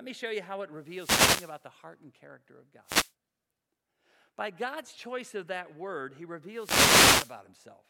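Wireless microphone noise hits occur at 0.77–1.68 s (after "show you how it", before "heart and character of"), 2.84–3.12 s, and 6.48–7.41 s (after "of that word he"). Each time, the FM radio link fades and receiver noise rises over the speech as a swish of static, unlike a digital dropout's clean gap.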